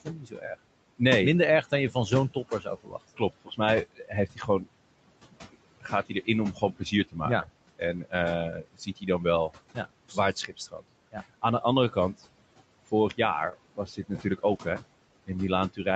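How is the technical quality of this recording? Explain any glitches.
The recording has clear processing faults. Noise suppression is heavy, several speech passages are turned down with the background, and a few network losses were patched over. The audio is band-limited to 8 kHz, as the Opus call path sets it.

Noise suppressor artifacts run through the whole clip. The suppressor pulls down bands it judges to be steady noise by about 21 dB, frame by frame. With room noise only about 16 dB under the speech, the noise sinks between phrases and rises under the speech.

Speech cut by the noise suppressor happens at 0.04–0.46 s, 1.63–4.67 s, 5.31–12.21 s, 12.86–13.19 s and from 13.76 s to the end. Quiet consonants and word endings were treated as noise and dropped by about 17 to 21 dB. Across the first four spans roughly three seconds of speech sounds swallowed or faint.

A lost packet rebuilt from error correction appears at 6.99–7.09 s (60 ms), 9.83 s, 13.51 s and 14.47–14.61 s (80 ms). 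Each gap was filled from a low-bitrate copy carried in the next packet, so nothing drops out, but those moments sound rougher and grainier.

A short concealed packet loss sits at 13.49–13.53 s. The first 20 ms were synthesized by extending the preceding sound before the rebuilt frame took over, giving a brief smear or wobble.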